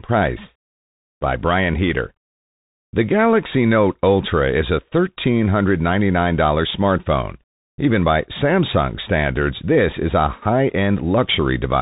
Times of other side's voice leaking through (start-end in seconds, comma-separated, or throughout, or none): none